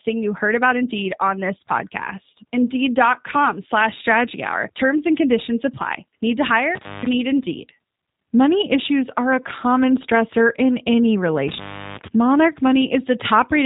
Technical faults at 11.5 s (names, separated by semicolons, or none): G.729 codec; intermittent contact